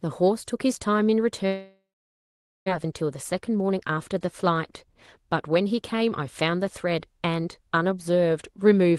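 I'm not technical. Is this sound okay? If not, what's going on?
No. From 1.47 to 2.70 s the speech drops out. The last sound is drawn out into a short fading buzz or hiss, then there are about 0.84 s of near silence before the voice returns, with about a second of speech simply gone. This is likely a long network dropout: the audio stopped arriving over the connection, the receiving end briefly padded the gap, and then it picked up again further along without the lost part.

Right after that, from 2.84 to 6.09 s, the speech runs slightly fast, about 6% quicker, and can feel a little rushed, though the voice keeps its normal pitch. This is a jitter buffer speed-up. After the interruption, the receiver had built up extra waiting audio, roughly a fifth of a second. To catch up, it snipped out many tiny slices of the voice, each one or a few vocal vibrations long, until the delay was back down.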